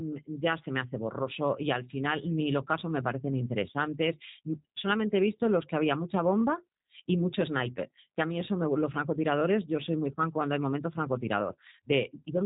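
From start to finish the speech carries G.729 codec damage, plainly audible. Nothing above about 3.8 kHz survives, and the voice sounds slightly rough and synthetic because it is rebuilt from a vocal tract filter, a pitch predictor and a few pulses per 10 ms frame. The character fits the G.729A variant at 8 kbit/s. Unlike a simple low-pass filter, which only dulls the top end, this adds a buzzy, frame-rate graininess to the speech itself.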